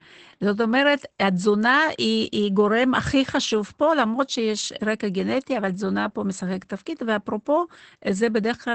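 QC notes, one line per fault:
throughout: Opus voice compression. Low-rate SILK coding, which fits about 12 kbps wideband, removes everything above 8.8 kHz and coarsens the excitation, leaving speech muffled, hoarse and faintly robotic.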